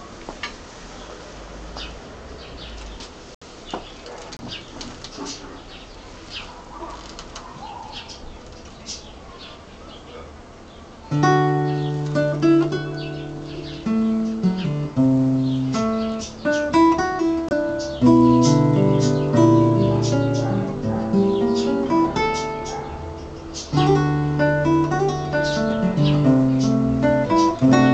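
Corrupt frame muted at 3.35–3.43 s, 4.37–4.40 s and 17.49–17.53 s: damaged compressed frames were rejected by the decoder and replaced with silence, leaving abrupt gaps without shifting the timing.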